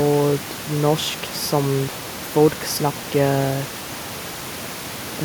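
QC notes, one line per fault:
No faults are heard in this speech clip. Room noise sits in the background, about 11 dB below the speech, as part of the original recording.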